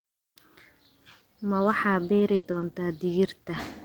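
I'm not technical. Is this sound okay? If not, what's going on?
No. Between 1.93 and 3.55 seconds the speech has a few brief ticks and smeared hiccups. These are scattered short gaps: about three small pieces of the audio, roughly 120 ms in all, went missing in transmission, and the receiver covered each hole by stretching the sound just before it.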